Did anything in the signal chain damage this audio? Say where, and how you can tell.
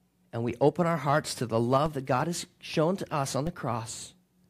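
Yes. Two DC steps occur at the converter or input stage. The waveform's zero line jumps by about -25 dBFS at 1.86 s, after "our hearts to the", and at 3.47 s, after "shown to us on". Each offset drains away through a 20 Hz high-pass, heard as a low thump.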